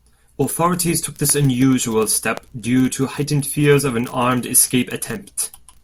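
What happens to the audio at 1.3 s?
A single loud pop lands at 1.30 to 1.32 s, peaking roughly ten decibels above the speech, which continues underneath. It sounds like a sharp click-thump, likely from a brief voltage spike, such as a switch or static discharge, entering the signal chain and being shaped by downstream circuitry.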